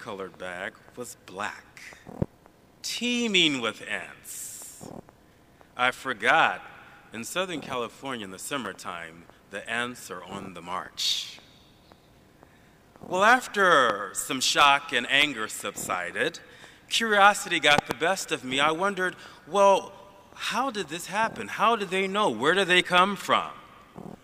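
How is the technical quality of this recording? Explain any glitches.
The recording has two kinds of glitch: three bursts of loud pops and two brief spots where chunks of audio play out of order.

Loud pops occur at 2.22 to 2.25 s, 13.90 to 13.92 s, and 17.78 to 17.94 s. The first two are single pops, about 15 dB above the surrounding level. The last is a double pop, about 20 dB up. Each is a sudden voltage pulse added to the signal. It is likely from a plug, a switch, static or a driver glitch. The following circuits shape the pulse into a sharp thump. The sound carries on underneath.

Chunks out of order occur at 8.65 to 8.67 s and 10.01 to 10.05 s. In each case a 10 ms piece of audio arrived late. It plays after pieces that should follow it. The first spot sounds like a displacement of one chunk. The second sounds like about three. Nothing is lost, but the sequence is scrambled. That creates hard joins at the edges. 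Each spot is heard as a quick jumbled moment.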